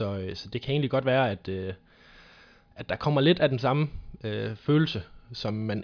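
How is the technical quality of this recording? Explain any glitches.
No glitches turn up anywhere in the recording; the speech signal stays continuous and undisturbed throughout, with nothing technical breaking into it.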